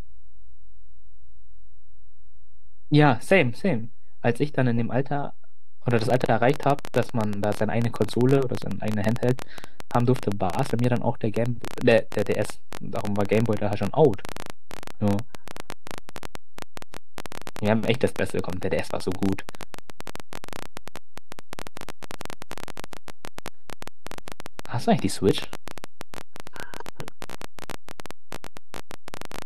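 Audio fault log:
throughout: DC offset. The whole speech waveform sits shifted from zero by about -26 dBFS, inaudible itself but eating headroom and adding steady energy at the lowest frequencies.
5.91 to 29.43 s: train of clicks. Roughly 400 similar pulses tick over the speech and its pauses, about 14.8 per second at an uneven pace, peaking about 10 dB above it. Likely from interference or a faulty connection or power supply.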